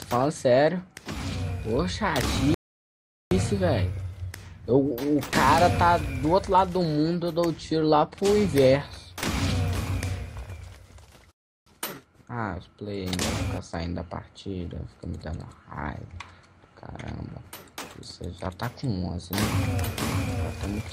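Rebuffering stalls cut the audio to silence twice, from 2.54 to 3.31 s and from 11.31 to 11.67 s, adding about 0.77 s and 0.35 s. The player ran out of buffered data, waited, then resumed exactly where it stopped, so nothing is lost.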